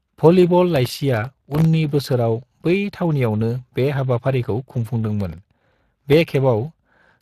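The whole clip carries Speex codec damage. The excitation gets too few bits, so the speech sounds plainly noisy and hoarse. The grain fits a bitrate near 22 kbps. Nothing is heard above 15.3 kHz.

From 0.70 to 1.65 s, processor overload crackle tears through the speech. Buffers under a millisecond long miss their deadlines dozens of times in a row. Each miss repeats a scrap of old audio with hard edges. The result is a gritty burst of crackle.

The same crackle returns from 5.21 to 6.13 s. The cause is the same: many tiny buffers finish late and leave stale fragments behind. The tearing is slightly shorter here and stops when the load passes.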